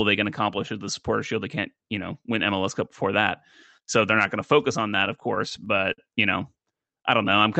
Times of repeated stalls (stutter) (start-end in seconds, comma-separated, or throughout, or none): 5.05-6.00